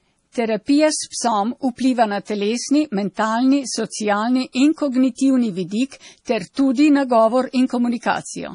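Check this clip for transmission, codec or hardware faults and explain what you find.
One codec fault runs through the whole recording. From start to finish the speech sounds watery and swirly, with metallic chirping on s sounds and softened consonant attacks, and nothing is heard above 10.6 kHz. This is likely heavy MP3 compression, at a rate around 32 kbps. Starved of bits, the encoder cuts the treble at a fixed point and drops weak frequency lines, which flicker on and off between frames to produce that swirl.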